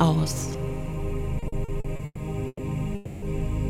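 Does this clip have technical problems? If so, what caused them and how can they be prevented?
Yes. From 1.39 to 2.62 s the audio repeatedly stutters and drags. It is the repeated stalls (stutter) fault: packets kept arriving late, so the jitter buffer ran dry seven times. The receiver stretched the last sound over 420 ms in total, about a third of that stretch, with the longest hold 120 ms, and nothing is lost. A larger adaptive jitter buffer and a steadier network path with less congestion would prevent it.

From 2.95 to 3.25 s the sound hangs as a smeared continuation for 270 ms, never dropping to silence, then picks up where it stopped. This call audio freeze was likely caused by packets held up in transit, which emptied the jitter buffer and pushed the audio 270 ms later. Prioritising the audio traffic (QoS) and avoiding congested or unstable links would prevent it.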